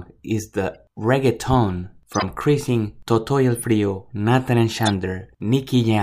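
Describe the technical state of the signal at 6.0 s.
At 6.0 s the speech signal is intact, with no audible technical fault.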